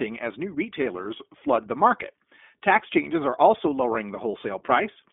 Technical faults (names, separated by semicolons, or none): iLBC codec; lost iLBC frames